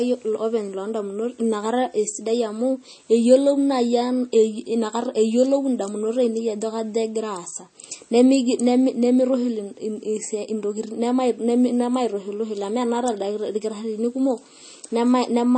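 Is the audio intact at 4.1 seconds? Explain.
No, at 4.1 s the speech carries the same damage as the whole clip, most likely MP3 compression at a low bitrate, around 32 kbps. Nothing survives above 8.4 kHz, and weak frequency lines flicker between frames, so s sounds turn watery and swirly.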